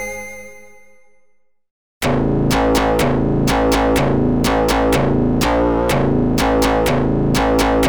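Nothing stood out as a technical fault on listening to the clip.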